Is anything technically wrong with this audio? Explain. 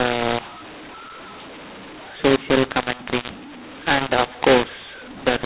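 Yes. Throughout the whole clip there is a mu-law and A-law mix-up. The speech was coded with G.711 A-law but decoded as if it were mu-law. Because the two logarithmic curves assign different levels to the same 8-bit codes, sample amplitudes are scrambled: some swell, some shrink, and near-silent samples jump well above zero. The speech sounds harsh and gritty, and the pauses fill with hiss. On a waveform the gaps look thick rather than flat. On a spectrogram, broadband noise smears across the band, which stops at 4 kHz as expected for 8 kHz telephone coding.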